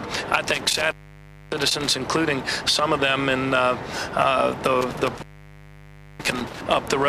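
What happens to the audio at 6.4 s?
At 6.4 s you're inside a stretch of intermittent contact running from about 4.81 to 6.61 s. A loose cable or plug breaks the connection, open for roughly 0.97 s in total, so the sound drops out with crackle at the edges and leaves just faint hiss in the gap.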